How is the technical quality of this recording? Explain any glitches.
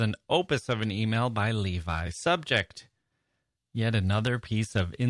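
No glitches or technical faults can be heard anywhere in the speech recording.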